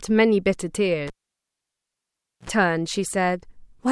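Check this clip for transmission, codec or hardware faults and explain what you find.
There's one hardware fault here: the cable was pulled and plugged back in. At 1.07 s a pop cuts the speech and the sound drops to near silence for about 1.37 s. As the plug goes back in, only the tip touches at first, so about 65 ms of 60 Hz mains buzz gets through before a second pop at 2.50 s. Then the speech picks up again.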